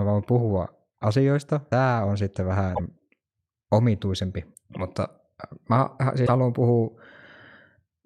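Damaged data in a compressed stream occurs at 2.73–2.80 s, just after "on sitten", and again at 6.23–6.29 s. Corrupted bytes make the decoder misread those frames and lose sync while hunting for the next header, leaving brief glitches of about 60–80 ms.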